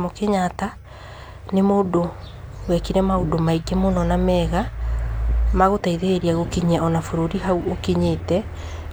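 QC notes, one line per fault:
No faults found in this speech clip.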